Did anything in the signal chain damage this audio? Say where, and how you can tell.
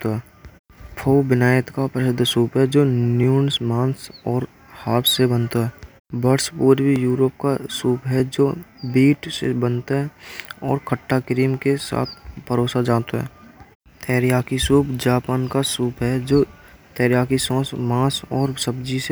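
Yes: clock drift buffer slips at the buffer stage, regular clicks every 1.24 s from 0.76 to 18.13 s, likely from mismatched device clocks. The steady spacing rules out random network dropouts.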